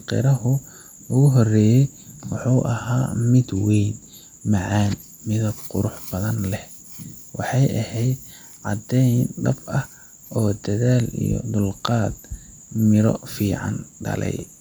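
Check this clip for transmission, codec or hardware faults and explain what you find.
Nothing audible points to a transmission, codec or hardware problem anywhere in the speech.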